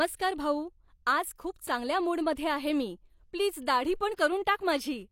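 Pre-echo occurs at 2.35 s, just before "आहे मी प्लीज", and again at 4.16 s, right after "आहे मी प्लीज". Each time, quantisation noise sized for a sharp speech onset spreads about 17 to 18 ms ahead of it, so a brief hiss precedes the attack and the onset sounds smeared.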